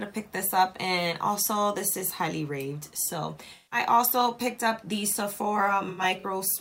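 AAC frame loss with concealment occurs at 3.55 to 3.79 s and again at 5.89 to 6.24 s. The decoder lost compressed frames and patched the gaps by re-using the last good spectrum. In the first, about 0.17 s goes missing, heard as a smeared, noisy patch. The second scatters about 0.15 s of losses across 0.34 s, the longest run around a tenth of a second, giving broken, phasey patches.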